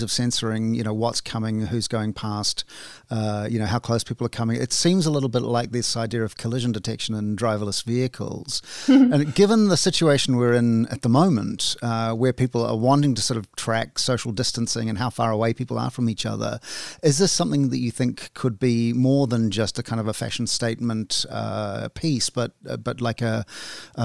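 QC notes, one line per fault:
The speech signal holds a steady, intact technical state throughout, with no faults detected.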